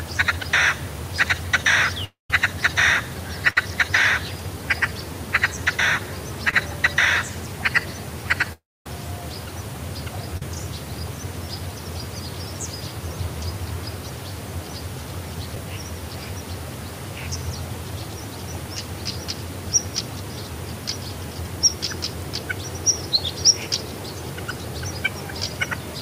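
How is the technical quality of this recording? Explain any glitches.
The recording is marred by repeated transmission gaps: two long dropouts, one burst of packet loss and four short concealed losses.

From 2.04 to 2.30 s and again from 8.53 to 8.86 s there are what sound like long network dropouts, likely from the connection stalling. The audio carries on briefly as a fading buzz or hiss, then goes dead for about 160 ms in the first gap and 250 ms in the second. It resumes with roughly 260 ms and 330 ms of material gone. A waveform shows a taper into a flat line, and a spectrogram shows a smeared tail followed by a near-empty band.

Between 3.50 and 3.57 s a burst of packet loss removes about 50 ms. The receiver stretches the last sound for roughly 60 ms and turns it down as it goes, so it is heard as a short fading hold before the audio jumps forward. On a spectrogram this appears as horizontal streaks that dim out, ending in an abrupt change at the resume point.

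Short concealed packet loss occurs at 6.50–6.54 s, 10.37–10.42 s, 15.55 s and 23.16–23.18 s. Each hole is only 10 to 30 ms. The decoder patches it with an extrapolation of the preceding sound and then blends back into the real audio. The result is a tiny smear or wobble, and a brief transient may disappear. Visually these show as thin blurred slivers.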